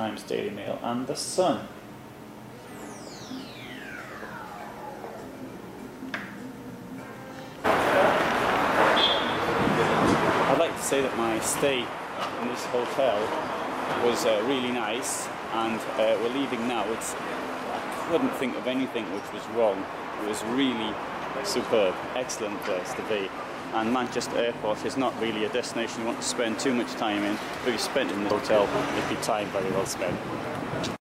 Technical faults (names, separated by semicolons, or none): compressed frames skipped